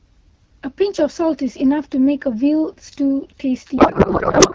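From 3.77 s to the end at 4.55 s, a codec payload misread turns the clear, wideband AMR speech, consistent with 12.65 kbit/s, into garbled warbling noise that barely tracks it, consistent with octet-aligned frames unpacked as bandwidth-efficient. Unlike packet loss, nothing drops out. Valid-looking frames decode into the wrong sound.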